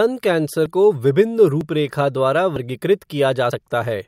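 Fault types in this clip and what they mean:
Audio missing between chunks: the speech jumps ahead at 0.66, 1.61, 2.56 and 3.52 s, losing roughly 50 ms each time, likely as one-second chunks are closed and reopened; the waveform shows abrupt joins without silence, the spectrogram thin vertical seams.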